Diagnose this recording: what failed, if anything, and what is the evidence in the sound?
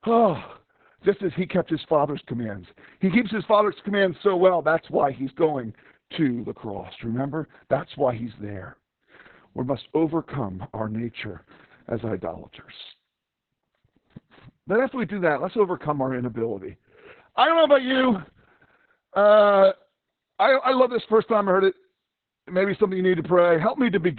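Codec stage: Opus voice compression in SILK narrowband codes the excitation coarsely, so speech throughout is cut above 4 kHz, hoarse and robotic, fitting about 6 kbps.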